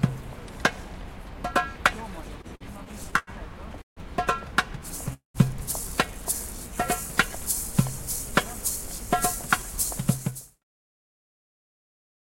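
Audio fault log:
2.41–3.30 s, repeated stalls (stutter): six short gaps up to 90 ms, about 0.2 s filled by continuing the last sound as the jitter buffer kept running dry.
3.82 s and 5.13 s, call audio freeze: the sound holds as a fading buzz, then falls mostly silent, gaps of 0.15 s and 0.21 s in all, likely from delayed packets emptying the buffer.
8.26–12.31 s, jitter buffer speed-up: the sound runs about 5% fast at unchanged pitch as tiny pitch-period slices are trimmed, roughly 0.2 s removed in total, through the smooth fade-out ending near 10.6 s.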